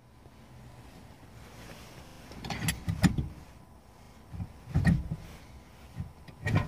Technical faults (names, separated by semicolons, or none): repeated buffer